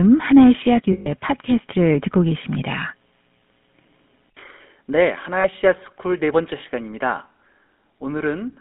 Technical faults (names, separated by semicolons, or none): GSM full-rate codec; lost GSM frames